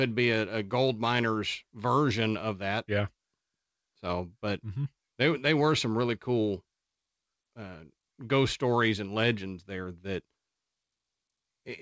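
No technical faults can be heard in this speech clip. It has come through a call path, and the sound stops at about 8 kHz, which fits a wideband call codec such as G.722.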